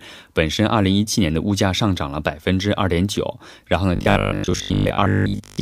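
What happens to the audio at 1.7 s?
Nothing goes wrong at 1.7 s; the speech carries straight through that moment with no dropout, click, glitch or distortion.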